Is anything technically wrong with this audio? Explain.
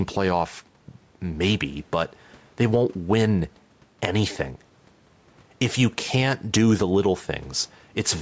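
Yes. Gain pumping runs through the whole speech clip. The level swings by around 5 dB, dropping on loud syllables and recovering in between, which squashes loud and soft parts together. The likely cause is input gain set too high, with a fast limiter or compressor repeatedly pulling it down. The low room noise, about 40 dB under the speech, and the call-style band limit with nothing above 8 kHz are not faults.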